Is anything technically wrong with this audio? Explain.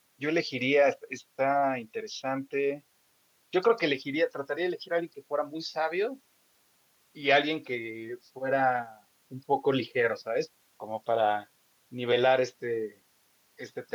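No, nothing technically wrong turns up here, as the recording sounds as it should throughout.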